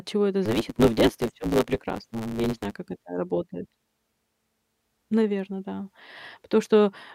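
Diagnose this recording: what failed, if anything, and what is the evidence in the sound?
A block size mismatch, truncated type, at the driver or buffer stage, from 0.45 s to 2.74 s. The speech carries a steady buzz at about 109 Hz throughout that stretch. It also runs about 1.16 times fast, while its timbre stays. One stage writes longer blocks than the next one reads, so the tail of every block is discarded. The buzz rate and speed-up fit a 512-sample write block being read in shorter pieces.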